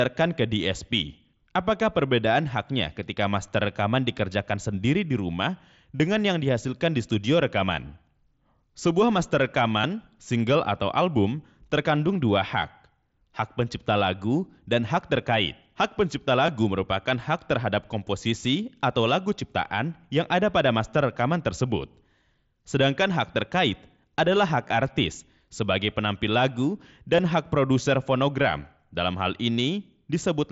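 Speech clip with concealed Bluetooth headset packet loss: lost voice packets were patched from recent waveform, giving brief buzzy repeats at 5.96–6.00 s, 9.82 s, 16.47 s, 24.68 s and 27.17 s.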